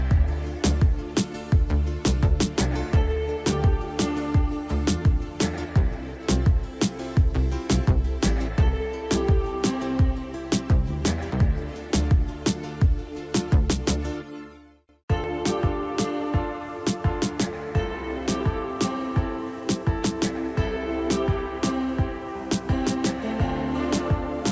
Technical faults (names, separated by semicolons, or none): none